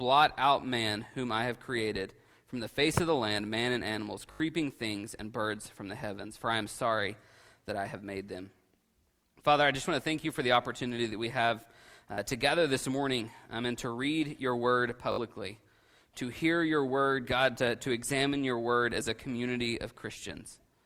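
The sound stutters three times from repeated buffers, where new audio arrived late and playback reused the last block. At 4.32 to 4.4 s one short piece plays about four extra times with hard joins, which fits a 20 ms buffer, and roughly 70 ms of material goes missing. At 12.14 to 12.18 s there are two extra plays and about 40 ms is lost. At 15.12 to 15.18 s there are three extra plays and about 70 ms is lost.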